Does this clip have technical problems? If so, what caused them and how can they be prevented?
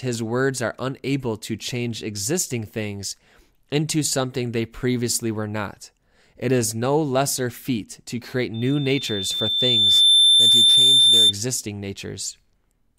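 Yes. From 8.54 s to 11.33 s there is a loudspeaker feedback squeal: a steady tone at 3.6 kHz swells over about a second and a half until it sits roughly 10 dB above the speech. The microphone was picking up its own loudspeaker, and at that frequency the loop gain exceeded one. On a spectrogram it is a bright horizontal line at 3.6 kHz; the waveform envelope balloons. Lowering the gain, keeping the microphone away from the speaker or notching 3.6 kHz prevents it.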